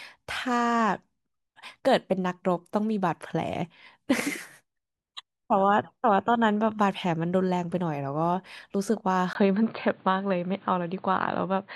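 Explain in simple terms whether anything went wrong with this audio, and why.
At about 9.33 seconds the speech suddenly turns dull and boxy, as if heard through a cheap headset, and stays that way to the end. A tiny gap of about 20 milliseconds marks the switch, and a faint new background noise appears, though the loudness stays the same. This is likely an input switched to a poorer device: the recording jumped to another microphone that carries nothing above 4.6 kHz, stripping away the crisp upper sounds.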